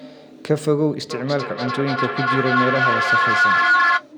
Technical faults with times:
1.10-4.08 feedback echo between two devices

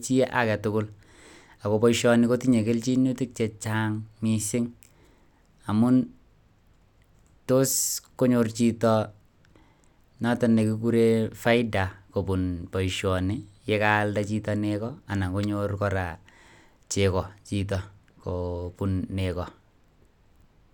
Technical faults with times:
none

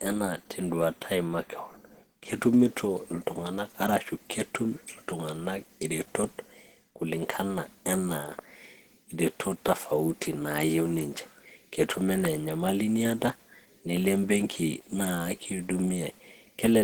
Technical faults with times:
0.00-16.84 Opus compression

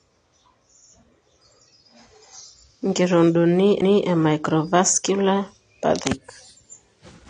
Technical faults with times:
0.00-7.29 AAC compression

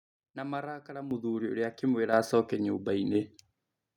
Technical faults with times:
1.11 microphone volume stepped up
2.13 microphone volume stepped up
3.15 microphone volume stepped up

